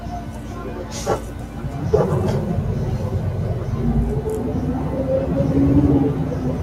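Across the whole clip a noise suppressor applied to music or sounds is at work: a speech-oriented processor treats sustained tones, ambience and decay as noise and pulls them down, so onsets pass while held portions sink by about 5 dB, giving audible pumping and thinning.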